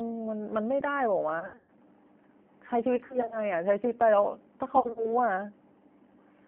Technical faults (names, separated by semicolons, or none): G.729 codec; VoIP packet loss concealed by the speech codec